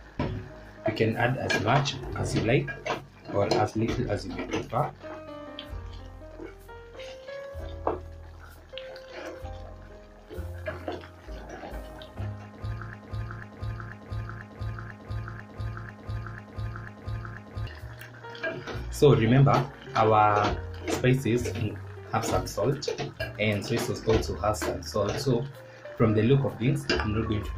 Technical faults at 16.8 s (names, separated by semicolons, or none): broken-record loop